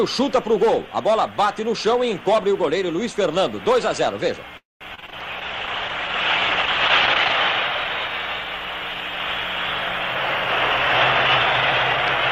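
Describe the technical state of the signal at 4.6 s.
At 4.6 s the last sound stretches into a brief fading buzz or hiss, then roughly 180 ms of silence, before resuming intact about 0.23 s late. This call audio freeze (4.57–4.83 s) likely came from delayed packets emptying the jitter buffer.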